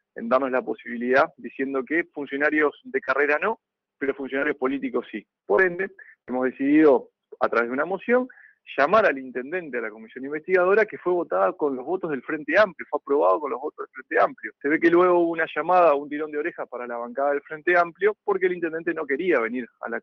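Between 2.59 and 6.33 s come scattered short gaps: around ten lost or late packets, the longest only about 50 ms, each patched by stretching the preceding sound. They give brief ticks and smears rather than one long dropout, over a top end limited near 6 kHz.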